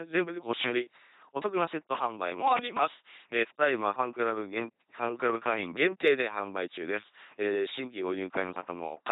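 From start to finish the speech runs through an LPC-10 vocoder, with heavy damage that fits a 2.4 kbit/s channel. Each frame is rebuilt from a ten-pole tract filter driven by either a pulse train or noise, never a mix, so the voice buzzes mechanically, and it lurches into hiss or buzz wherever that voicing call goes wrong. A spectrogram shows rigid, evenly spaced harmonics, blocky frame edges, and nothing above 3.9 kHz.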